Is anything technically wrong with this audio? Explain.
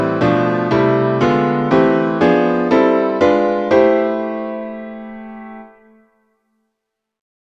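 No, there's nothing technically wrong here that I can hear; the audio holds together nicely and nothing jumps out as a problem at any point.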